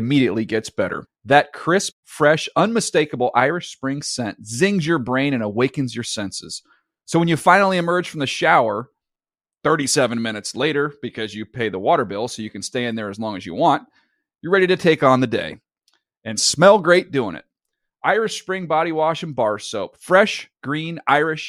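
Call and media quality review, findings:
No faults found in review.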